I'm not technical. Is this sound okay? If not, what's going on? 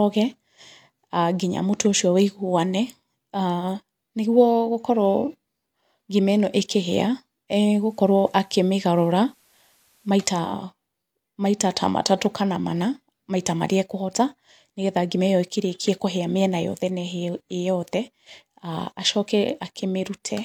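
No. From 7.55 to 10.7 seconds the speech shows digital radio blending to analogue. The radio lost its digital signal and faded over to the station's FM broadcast of the same programme, then faded back. Each changeover takes about 0.4 seconds. While on FM, a faint hiss sits under the speech, and the overall loudness shifts slightly.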